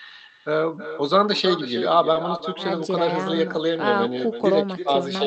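Speech heard over a call path, with sound extending up to about 8 kHz, carrying echo with no canceller all the way through. Every phrase is shadowed roughly a third of a second later by a copy about 11 dB quieter and thinner. This is the far end's loudspeaker feeding its microphone, returning the talker's voice after the network round trip. Unlike room reverberation, which smears continuously off each sound, this is a distinct, recognisable repeat arriving after a clear gap. Two short stalls from a late packet also occur, at 2.13–2.17 s and again at 2.37–2.41 s. Each time the jitter buffer ran dry, so the receiver held the last sound for about 20 ms with a slight buzz or dip, then carried on from the same point. That separates it from packet loss: no audio is skipped, and the sound is merely stretched rather than cut or replaced with a gap.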